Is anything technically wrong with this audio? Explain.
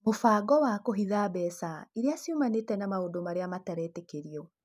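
No, nothing technically wrong can be heard in this speech recording.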